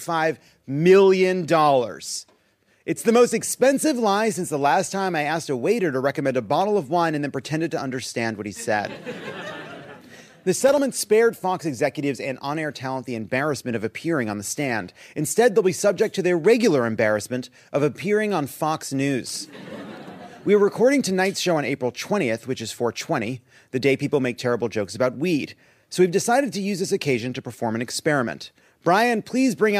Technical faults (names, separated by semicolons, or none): loose connector crackle